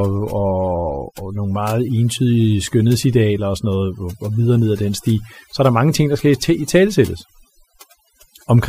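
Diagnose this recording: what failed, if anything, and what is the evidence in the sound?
Across the whole clip the background drops, broken only by twinkling specks. That points to overdone noise removal at the processing stage: a noise reducer driven too hard pulls individual frequency bands down or off whenever they drop near its noise estimate. The quieter components of the speech fall below that line and vanish with the noise, and isolated bands flickering on and off leave the sparkling residue.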